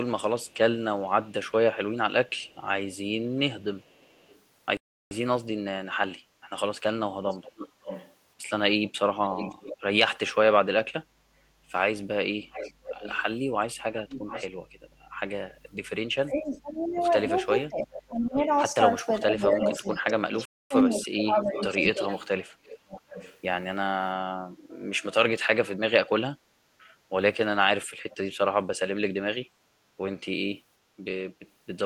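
A speech recording in which the far end's echo canceller likely failed to remove what its microphone picked up from its loudspeaker, so an echo leak sends a delayed copy of the talker back: very faint at 0.43–4.4 s with a 450 ms delay, around 15 dB below the speech at 7.28–9.77 s (558 ms), 12.51–14.48 s (666 ms) and 16.81–23.4 s (750 ms), and faint again at 28.10–28.17 s. The player likely ran short of data, causing a playback stall: the sound drops out mid-flow for 342 ms at 4.77–5.11 s and for 252 ms at 20.45–20.71 s before continuing. While both sides talk at 16.25–22.1 s, the canceller likely mistook the talker for echo, so speech is suppressed in double talk: the voice dips by up to roughly 25 dB, about three seconds in total.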